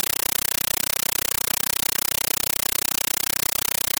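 Throughout, the speech is replaced by loud chattering static: a compressed stream played as audio, AC-3 data taken as samples rather than decoded. Noise bursts of 9.33 ms repeat 31.25 times a second between silent padding, which fits a 448 kbps stream. This rigid frame rhythm, with no underlying sound, separates it from random interference.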